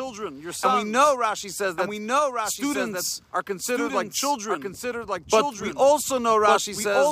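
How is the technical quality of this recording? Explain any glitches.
The recording has one fault, present for its whole length. A doubled audio track runs throughout: a second, full-band copy of the sound trails the original by about one second, sitting roughly 5 dB quieter. The likely cause is the same signal reaching the mix twice, once directly and once through a slower capture path or a misaligned edit. The copy has no reverberant tail or room colouring, so it reads as a distinct, flat repeat rather than an echo, smearing every event into a second, offset layer.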